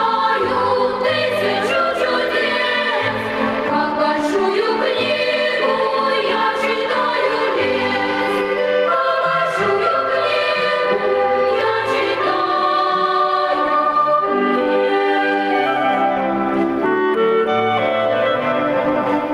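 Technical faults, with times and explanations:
Throughout, gain pumping: input gain likely far too high, so a fast limiter clamps each loud sound, and the gain swings about 10 dB.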